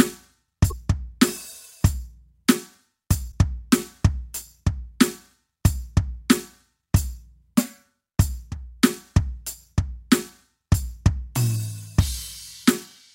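At 0.69–0.72 s and 3.31–3.33 s the music skips ahead with a brief glitch lasting about one 26 ms frame, likely a broken MP3 bit reservoir.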